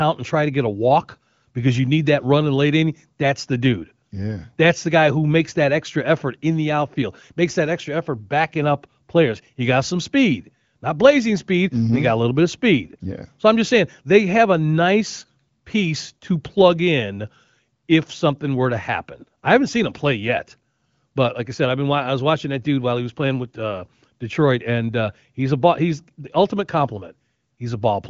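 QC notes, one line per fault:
No faults found: the speech runs through the AMR wideband (HD Voice) codec at 18.25 kbit/s, with the top of the spectrum ending near 7.5 kHz as that path normally does.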